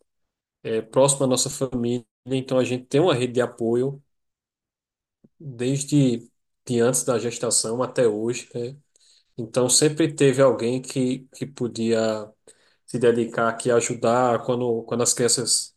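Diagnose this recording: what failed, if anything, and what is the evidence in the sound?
Nothing failed: no stage from capture to playback leaves an audible defect anywhere in the speech.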